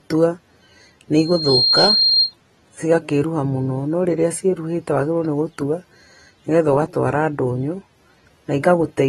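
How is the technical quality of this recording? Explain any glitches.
Two problems hold this speech recording back: coding damage all the way through and a feedback squeal near the start.

The whole clip has plainly audible coding damage and nothing above 13.9 kHz. That points to AAC compression, likely AAC-LC at a low bitrate of roughly 33 kbps. At that rate the encoder drops the top of the spectrum and quantises what's left coarsely.

From 1.17 to 2.33 s there's a loudspeaker feedback squeal, a single 4.2 kHz tone that swells up over about 0.4 s and sits about 5 dB above the speech. The mic was picking up its own speaker, and at that frequency the loop gain went above one, so the tone kept feeding itself.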